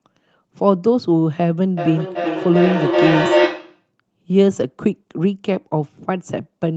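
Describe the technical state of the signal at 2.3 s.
At 2.3 s you're inside a stretch of feedback echo between two devices, running from 1.77 to 3.91 s. Two devices in the same room are on the call, so one plays back what the other's mic sent, that mic picks it up again, and neither echo canceller touches the other's playback. Each bit of sound comes round roughly every 400 ms, thinner and ringier, and the loop peaks at about 1 dB above the direct speech, so the repeats stack up rather than fade.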